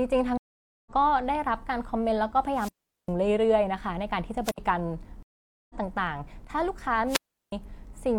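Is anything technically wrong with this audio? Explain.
Yes, the speech has three kinds of technical fault.

Stream reconnect at 0.38 to 0.91 s and 5.23 to 5.75 s: the connection broke and the player restarted its decoder mid-stream. You hear silence of about 486 ms and then 470 ms. The speech resumes further on, skipping roughly 0.2 s the first time and about half a second the second time.

Wireless microphone squelch dropout at 2.53 to 3.11 s, 4.43 to 4.58 s and 7.07 to 7.52 s: the FM radio link faded until the receiver's squelch shut the output. Each dropout brings a brief rise of hiss, then a hole of near silence lasting about 399 ms, 67 ms and 361 ms.

From 6.45 to 6.50 s the level abruptly falls by about 6 dB for 50 ms and then recovers. The likely cause is one channel dropping out. With only one stereo channel feeding the mono sum, the shared signal loses half its level.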